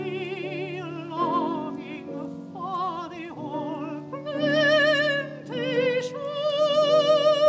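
Throughout, a tick recurs four times a second, every 250 ms, only while sound is present: the resampler restarted on every block. Each block was converted separately, likely from 48 kHz down to 16 kHz, so its edges lacked true neighbouring samples and carry a small discontinuity.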